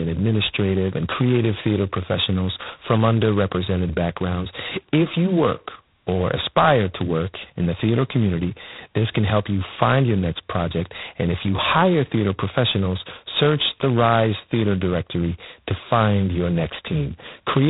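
Throughout the speech, the sound carries heavy G.726 ADPCM damage, with a harsh, rasping hiss that swells and fades with the speech level, which fits the lowest 16 kbit/s mode. Only two bits per sample describe the gap between each sample and its adaptive prediction, so the error is coarse. A spectrogram shows a hard ceiling at 3.9 kHz and grainy noise filling the band under each syllable, while the waveform looks rough and stepped.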